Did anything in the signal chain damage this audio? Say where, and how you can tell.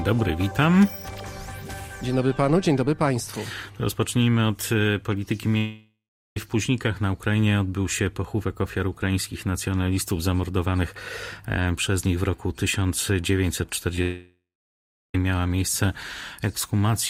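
Yes. The damage happened in the network path. There are two long network dropouts, from 5.57 to 6.37 s and from 14.02 to 15.15 s. In each, the last sound carries on as a fading buzz or hiss. It then sinks to silence, for about 0.39 s in the first gap and about 0.73 s in the second. The audio resumes later without the missing stretch. That pattern points to a likely break in packet delivery, not a local fault.

There is also a short concealed packet loss from 13.96 to 13.98 s, just before the second dropout. About 10 ms of audio failed to reach the decoder in time. The receiver patched the hole by extending the preceding sound and blending back into the real signal. You hear it as a tiny smear or wobble rather than a gap. It is a network-stage fault, handled by the decoder's concealment.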